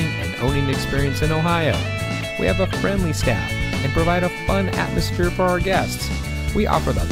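Nothing stood out as a technical fault anywhere in the recording on listening.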